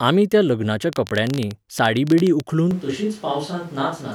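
Interference from nearby equipment or a faulty connection is the likely source of a train of clicks from 0.93 to 2.41 s, just after "आमी त्या लग्नाच्या". Some twenty similar pulses arrive at about 15 per second, unevenly spaced, and peak around 10 dB above the speech, popping through both the words and the gaps.

At 2.71 s the close microphone's signal likely dropped out and a distant microphone took over, lasting to the end. The voice turns abruptly roomy and hollow, thinner in the bass, roughly 5 dB quieter, with background noise rising to about 25 dB below the speech.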